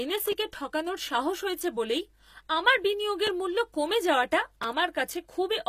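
Speech, with plainly audible codec damage throughout and four stutters. The spectrum stops at 14.9 kHz, and the treble below that edge does not behave like the original: harmonics fail to line up with those beneath, giving s sounds a synthetic edge. The likely cause is HE-AAC compression at a low bitrate, which fits about 24 kbps, rebuilding the upper band by spectral band replication. On a spectrogram the top band looks like a shifted copy of lower bands under a coarse envelope, with nothing above 14.9 kHz. The stutters are repeated buffers: at 0.32 s, 3.27 s and 4.63 s a short piece plays one extra time, and from 1.59 to 1.61 s it plays two extra times, each with a hard join, heard as a click or brief buzz. The repeats fit a 10 ms buffer replayed when new audio arrived late. On a waveform each shows an identical short segment copied end to end, with a discontinuity at every join.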